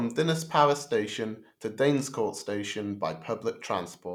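No technical faults are audible.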